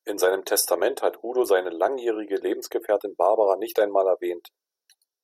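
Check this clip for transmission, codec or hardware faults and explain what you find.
The speech signal stays continuous and stable throughout, with nothing audible that points to a problem anywhere along its path.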